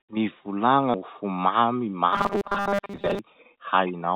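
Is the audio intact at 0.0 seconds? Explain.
Yes, the audio is intact at 0.0 seconds, carried through the WebRTC call path with nothing above 4 kHz.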